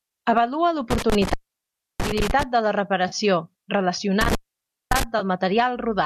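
A speech recording with an intermittent contact, a loose cable or plug opening momentarily, between 0.91 and 2.43 s, just before "de la", and again between 4.21 and 5.03 s. Each time the line drops out for roughly half a second or more, with crackle at the break and make and faint hiss while it is open. AAC frame loss with concealment follows at 3.08 s, right after "de la", and at 5.19 s. The decoder rebuilds missing spans of 40 ms and 20 ms from the last good spectrum, which fits about four and two lost frames, leaving brief smeared, noisy patches. A slight graininess is likely from light low-delay AAC compression.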